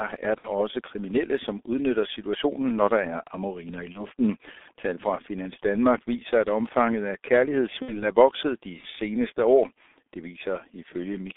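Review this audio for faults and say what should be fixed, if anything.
The speech runs through the G.723.1 codec for its whole length, and the damage is heavy. The band is confined to roughly 300 Hz to 3.6 kHz, so the sound is thin and muffled. Consonants smear. The voicing has a hoarse, rough edge. That fits a bitrate near 6.3 kbit/s. The codec works in 30 ms frames and updates its voice model slowly, so fast changes get blurred. To prevent it, use a wideband codec at a higher bitrate.

VoIP packet loss concealed by the speech codec occurs three times: 0.39 to 0.49 s, 3.92 to 4.06 s, and 7.82 to 8.09 s. In each, the decoder fills the gap by repeating its last pitch and filter at falling gain. The result is a short, fading stretch. The first and third gaps fit two lost 30 ms frames, and the second fits one. The sound stays weak or distorted after each gap until the decoder recovers. To prevent it, add jitter buffering and forward error correction on the network path.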